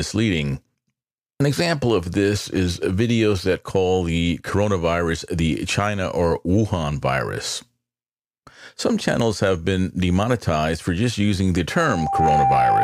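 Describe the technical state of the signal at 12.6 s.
At 12.6 s the signal is inside a loudspeaker feedback squeal that begins at 11.71 s, right after "for just using the", and runs to the end of the clip at 12.83 s. The microphone is picking up its own loudspeaker, and at 790 Hz the loop gain exceeds one, so that tone swells over about half a second to roughly 5 dB above the speech. A spectrogram shows one bright horizontal line at 790 Hz, and the waveform's envelope grows into a dense, steady band.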